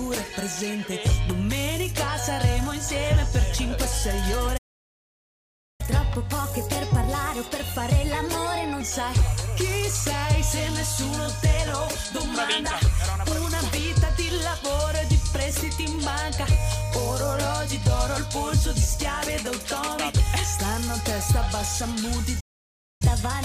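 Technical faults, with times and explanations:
4.57–5.81 s and 22.40–23.02 s, playback stall: The player most likely ran dry of buffered data or had its output thread held up, so nothing reached the output and the sound cuts off mid-flow into silence. The first gap lasts about 1.2 s, the second about 0.6 s. Each time the audio resumes abruptly once data flows again, leaving a clear hole rather than a fade.
5.81–8.81 s and 23.02–23.45 s, catch-up at higher speed: Right after each stall the player resamples its backlog to play it 1.15 times faster, recovering some of the lost time. Because the sound is simply sped up, pitch rises along with tempo, by about two semitones, giving a hurried, slightly chipmunk-like quality. The first run lasts 3 s before dropping back to normal speed. The second continues until the clip ends.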